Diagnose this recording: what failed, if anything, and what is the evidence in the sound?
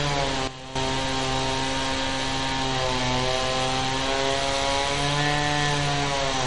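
Throughout the clip the sound has the watery, swirling texture of MP3 compression, and the damage is plainly audible. Nothing survives above 10.9 kHz, so the treble is gone and transients smear. This points to the codec stage, likely a low-bitrate MP3 encode around 48 kbps that forced the encoder to drop the top band and starve weak frequency lines. On a spectrogram this shows as a hard horizontal ceiling at 10.9 kHz, with speckled, flickering holes below it.

From 0.48 s to 0.76 s there is a sudden gain jump. The whole signal, background noise included, drops by about 12 dB in a single step and then jumps straight back up, with no fade on either edge. The likely cause is a digital gain change applied without a ramp, in the driver or processing stage. On the waveform the envelope shows a rectangular notch with vertical sides at both boundaries, and on a spectrogram the same span is uniformly darker across all frequencies.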